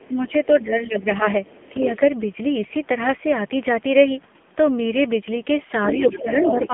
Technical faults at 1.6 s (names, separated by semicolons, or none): AMR narrowband mobile codec; other side's voice leaking through; speech suppressed in double talk